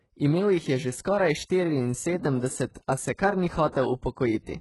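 Speech with heavily degraded treble throughout: the top sounds bright but synthetic, with gritty, lispy s sounds and nothing above 11.5 kHz. That points to a very low bitrate around 12 kbps and likely HE-AAC compression, whose rebuilt treble (unlike a plain low-pass) stays present but misaligned with the voice. Pre-echo appears at 2.74 s and from 3.72 to 3.75 s, just after "kar ni". A short hiss, 11 ms and then 26 ms long, runs ahead of a sharp onset and softens it. Because the noise sits just before the attack, these are codec block smearing rather than clicks or independent noise bursts.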